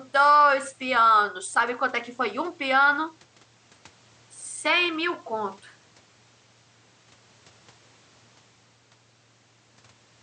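No technical faults are audible anywhere in this recording.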